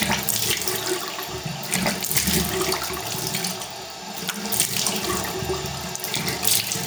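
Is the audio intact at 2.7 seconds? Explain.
No. At 2.7 seconds, as through the whole clip, the sounds show gain pumping. The gain swings by around 10 dB, leaving everything squashed toward one level. The likely cause is gain set far too high with a fast limiter or compressor clamping it. On a waveform the envelope looks flattened, with the noise floor rising between peaks; a spectrogram shows broadband background brightening and dimming in step with each loud event.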